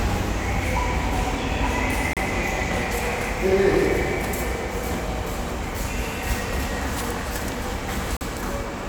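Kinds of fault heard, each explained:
Gap between stream segments: One segment's timestamps end short of the next, so the player fills the hole with silence. Two hard-edged dropouts interrupt the sound, 34 ms at 2.13 s and 42 ms at 8.17 s. They fall six seconds apart, matching the segment length. No audio is lost.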